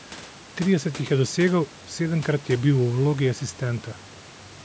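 Nothing stood out when listening to this speech recording.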